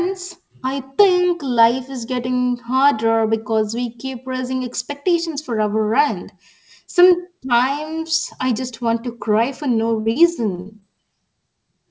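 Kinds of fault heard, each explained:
Burst of packet loss: Right after "to cry for no", around 10.00 to 10.08 s, about 60 ms of audio never arrived. The receiver extended the last sound and let it fade. A spectrogram shows a flat, frozen stretch of sound dimming before speech resumes abruptly further along.
Short concealed packet loss: Gaps of 20 to 40 ms at 10.11, 10.55, 10.61 and 10.80 s were patched by continuing the preceding sound, then blending back. They are heard as brief smears or wobbles, and on a spectrogram as short smudged bands.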